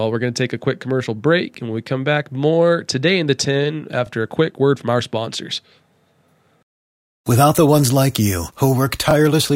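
At 1.54 to 1.57 s, just after "a quick commercial break" and before "and when we come", the speech stutters briefly with a click. This is overlapping chunks: the audio was handled in 2.5 s blocks, each beginning about 21 ms before the previous one ended, so that slice plays twice at each join. The same doubled stutter recurs at 4.07 to 4.09 s, ahead of "a quick word from", at 6.59 to 6.61 s, and at 9.11 to 9.13 s, right after "the ones like you".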